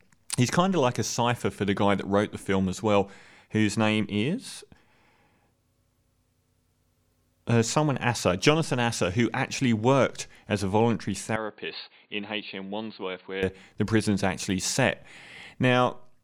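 Right after "worked as a voluntary", at 11.36 s, the speech abruptly turns dull and boxy, drops in level by roughly 10 dB, and picks up a faint new background noise well beneath it, with nothing above 4.6 kHz. There's no gap at the change. At 13.43 s, just before "the prison's actually set", full clarity returns. This is likely an input switched to a poorer device, a narrower-band microphone or headset call profile with its own tone, level and noise.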